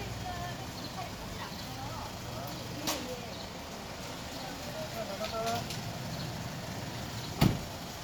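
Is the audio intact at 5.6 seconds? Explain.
Yes, the audio is intact at 5.6 seconds, with no dropout, click, distortion or other fault audible at that moment.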